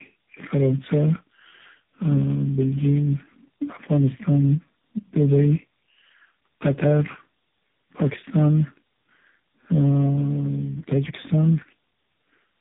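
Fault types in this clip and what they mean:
Tandem speech coding: the speech passes through about four low-rate speech codecs in succession, which fits a chain ending in AMR-NB near 6.7 kbit/s, so it sounds rough, muffled and warbly. A spectrogram shows nothing above 3.8 kHz and smeared, blurry harmonics and formants.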